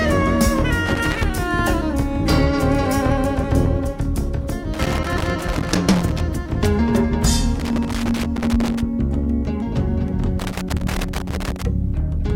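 Loose connector crackle breaks in four times: 0.86 to 1.24 s, 4.74 to 6.21 s, 7.60 to 8.81 s and 10.39 to 11.63 s. A worn or dirty contact is making and breaking as it shifts, chopping the signal and throwing in pops from any DC on the line. The bursts are irregular scratchy clusters that come and go with movement, unlike the steady, evenly spaced ticks of a clock or buffer fault.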